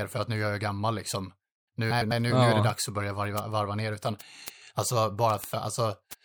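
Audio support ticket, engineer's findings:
Word clock ticks, 0.23 to 6.13 s: sharp ticks of uneven strength roughly every 0.15 s, about 40 of them. Receiver on its own clock, drifting around 150 ppm, slipping one sample each time.

Frames out of order, 1.90 to 2.12 s: garbled flutter. Two adjacent 104.5 ms blocks played swapped, which points to runs of four frames. No time lost.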